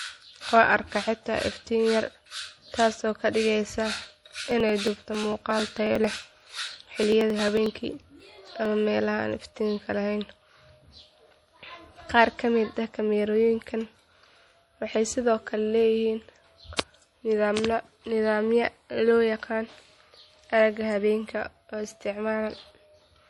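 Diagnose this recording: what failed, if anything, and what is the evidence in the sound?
The whole 23-second speech clip has a hard ceiling at 11.5 kHz, with a watery, swirly quality in the upper range and smeared consonant attacks. That points to the codec stage, likely MP3 compression at a low bitrate, something like 48 kbps. When the encoder runs short of bits it chops the treble at a fixed point and drops weak frequency lines that flicker on and off between frames. The damage is plainly audible here.

From 4.51 to 8.65 s there's a steady run of ticks, one every 0.09 s, about fifty in all. Each marks roughly 10 ms of audio simply skipped, not replaced by silence. That's the driver or buffer stage: periodic USB or driver dropouts, where something in the background stalls the bus or audio driver on a fixed schedule and a chunk of samples never makes it through. The even spacing gives it away.

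Right after "waxay sidoo kale leeyihiin", at 16.77 to 16.79 s, a brief hiss comes just ahead of a sharp attack, spread over about 23 ms, and the onset sounds softened. That's pre-echo, again from the codec stage. The transform spreads its quantisation noise across the whole block, so when a sudden loud onset lands late in the block, noise sized for the loud part leaks into the quiet stretch before it.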